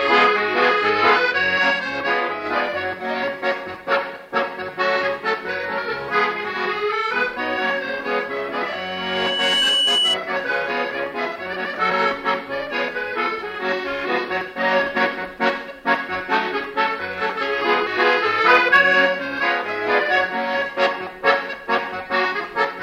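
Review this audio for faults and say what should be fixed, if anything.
A microphone was picking up its own loudspeaker, and the loop gain at 3 kHz exceeded one. From 8.71 to 10.19 s, a 3 kHz loudspeaker feedback squeal swells over about a second to roughly 5 dB above the programme. To prevent it, lower the monitor gain, move the microphone out of the speaker's coverage, or notch 3 kHz.

Compressed frames were skipped during decoding. The audio jumps ahead at 9.97 s (roughly 50 ms lost, inside the squeal), 11.9 s (about 200 ms) and 17.86 s (about 100 ms). Each gap is a multiple of a frame of about 26 ms. To prevent it, re-encode or transfer the file from an intact source, and check that the decoder isn't rejecting damaged frames.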